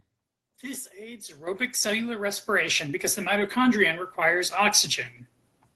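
Microphone volume stepped up at 1.47 s: the call software raised the input gain in one jump, so speech and background noise suddenly become about 9 dB louder together. Lost packet rebuilt from error correction from 3.39 to 3.49 s, just after "because the": about 60 ms of speech, which fits three lost packets, is played from rough low-bitrate backup copies in the Opus stream, sounding coarser and noisier.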